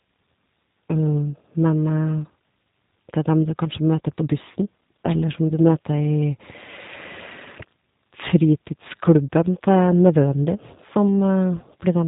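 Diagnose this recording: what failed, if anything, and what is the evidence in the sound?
The codec stage failed. Throughout, the speech passes through the G.729 codec and sounds plainly rough and synthetic. Nothing is heard above 3.8 kHz. The speech is rebuilt from a vocal tract filter, a pitch model and sparse pulses, which fits 8 kbit/s G.729A coding.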